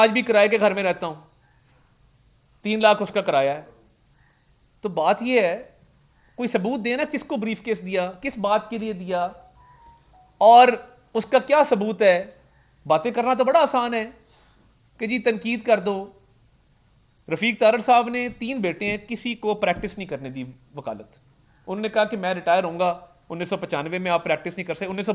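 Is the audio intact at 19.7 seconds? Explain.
Yes, the audio at 19.7 seconds is intact, with no dropout, click, distortion or other fault at that moment.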